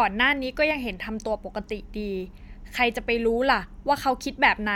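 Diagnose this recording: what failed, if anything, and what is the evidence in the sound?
Nothing in the speech recording points to a failure at any stage, from capture through to playback.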